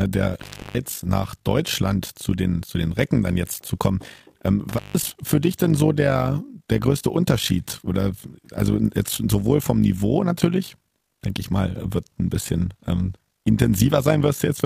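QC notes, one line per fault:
Throughout: overlap-add ripple. The speech has been split into windowed frames and rejoined with overlaps that fail to sum to a constant gain, so the level swings by about 11 dB roughly fifty times a second, giving a rough, robotic flutter. The waveform envelope shows regular scalloping, and a spectrogram shows evenly spaced vertical bands.
0.34–0.79 s and 4.69–5.04 s: intermittent contact. A loose connection opens briefly, for about 327 ms and then about 160 ms, dropping the speech to faint hiss with crackle at each edge. The waveform collapses to a thin noise floor between sharp spikes, which appear as broadband vertical lines on a spectrogram.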